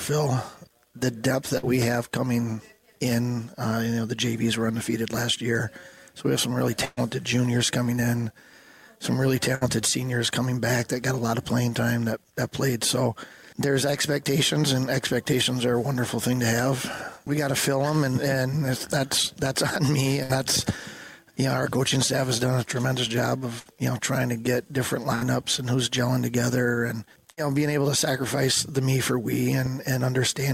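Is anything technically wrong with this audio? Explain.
Yes. A burst of packet loss recurs seven times: at 1.57, 6.85, 9.55, 20.23, 23.59, 25.15 and 27.31 s, each lasting about 60 ms except about 120 ms at 6.85 s. Late or lost packets were bridged by stretching and fading the last sound, so a held buzz or fading hiss briefly replaces missing audio. A loud pop at 29.66 s is likely from a voltage spike such as a plug or switch transient, adding one sharp pop about 5 dB above the sound.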